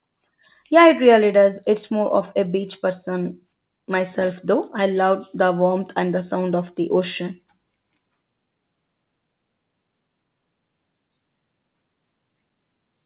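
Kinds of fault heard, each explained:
No faults can be heard in this speech clip. It has come through a WebRTC call path, and the sound stops at about 4 kHz, which fits a G.711 mu-law codec running at 64 kbps.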